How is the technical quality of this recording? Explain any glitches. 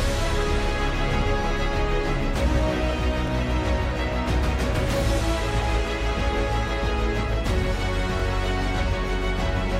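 Three brief stutters mar the recording, all from a repeated buffer, at 3.27–3.30 s, 6.39–6.41 s and 8.20–8.22 s. Each time, fresh audio failed to reach the playback device before it was due, so the device replayed its last block, a piece about 23 ms long that suggests a 1024-sample buffer. That fragment sounds twice in a row with a hard seam at the join, heard as a quick hiccup, though nothing appears to be lost from the audio.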